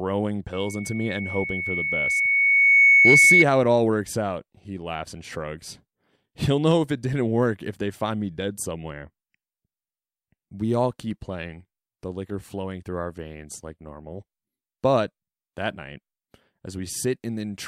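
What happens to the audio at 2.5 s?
A loudspeaker feedback squeal from 0.53 to 3.45 s: a microphone-loudspeaker loop howls at 2.2 kHz, swelling over about two seconds, unlike a fixed interference tone.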